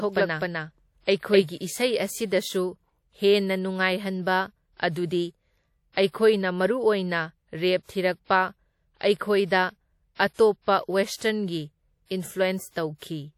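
Speech throughout, with plainly audible codec damage that is likely WMA compression: a ringing, washy texture and a hiss that swells and fades with the speech, which fits a transform codec at a bitrate around 48 kbps. On a spectrogram, nothing appears above 17.9 kHz, and the region below is blotchy, with weaker components missing in patches and noise smeared across tens of milliseconds around each sound.

From the very start until 1.44 s, a doubled audio track is mixed in. A full-band copy of the same audio trails the original by about a third of a second at roughly equal loudness, with no decay or room colouring. It is already running when the clip opens and cuts off abruptly at 1.44 s. A waveform shows each syllable's envelope repeated at that fixed offset, and a spectrogram shows the same pattern stamped twice, side by side. This points either to a second, slower capture path or to an edit that left two copies out of step.

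Pre-echo appears at 10.34 to 10.39 s (53 ms) and at 11.17 to 11.21 s (46 ms). In each case a short hiss arrives before a sharp attack, which then sounds softened. The cause is the codec spreading quantisation noise meant for the loud onset across its whole block, including the quiet stretch before it. On a spectrogram, each shows up as a faint broadband smear just ahead of the onset's vertical edge, and the waveform shows low-level fuzz where there should be near-silence.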